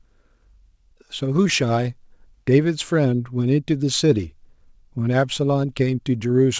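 Clock drift between sender and receiver runs through the whole clip: the sender's clock is roughly 5 percent fast, so the receiver's jitter buffer keeps overfilling. On a waveform nothing dramatic shows, just a steady push of sound arriving slightly faster than it can be played.

Repeated timing corrections follow from that, from 0.00 to 6.40 s. The receiver keeps cutting short pieces, so the speech plays at about 105 percent with small, unevenly spaced hiccups. A spectrogram shows tiny seams in the harmonics, under a band edge at 8 kHz that fits G.722.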